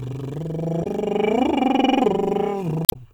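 Brief glitches break into the music from 0.80 to 0.86 s and again from 2.84 to 2.96 s. Both come from damaged data in a compressed stream: corrupted frames are misread by the decoder, which loses sync and hunts for the next valid frame header.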